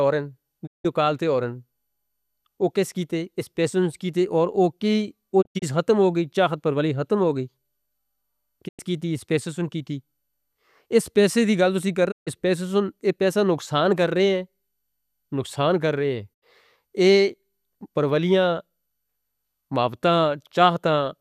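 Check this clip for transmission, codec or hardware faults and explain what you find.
The speech has five digital broadcast dropouts: 0.65–0.86 s (before "کال تے ہو رہے"), 5.41–5.64 s (before "ختم ہو"), 8.67–8.81 s (before "کیتے اس پیسہ سن"), 12.10–12.29 s and 16.33–16.44 s. Each time, the receiver stopped getting valid frames and muted, fading out and back in over 20 ms. The 5.41 s event is several short holes, the longest 72 ms. Waveforms show flat silent gaps, and spectrograms show blank vertical bands across all frequencies.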